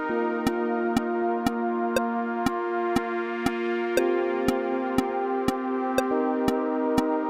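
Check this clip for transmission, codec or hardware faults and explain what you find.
No transmission, codec or hardware faults can be heard here, as the signal comes through without dropouts, distortion, glitches or interruptions.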